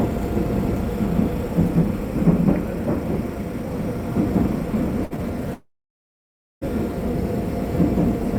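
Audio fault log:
5.05–5.13 s, burst of packet loss: a short run of audio packets never reached the player in time. The receiver stretched the last sound into a fading tail of about 50 ms, and 60 ms of sound is skipped before playback resumes.
5.54–6.64 s, long network dropout: audio stops arriving for over a second. The likely cause is a stall in the network stream. The last sound fades out briefly, then about 0.95 s of silence follows, and playback returns with 1.08 s of material missing.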